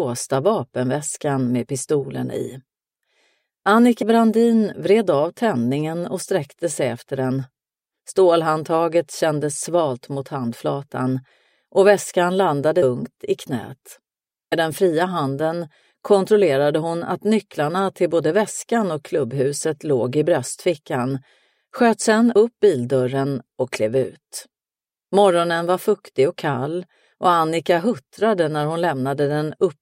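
Brief smeared blips interrupt the audio at 4.01, 12.82, 14.51 and 22.35 s. Each is a small forward jump, not a sharp click. These are compressed frames skipped: whole frames never reached the output, either missing or rejected by the decoder as damaged. The gaps, about 150, 150, 100 and 50 ms, fit a handful of 26.1 ms frames each. The overlap between neighbouring frames blurs every join into a blip.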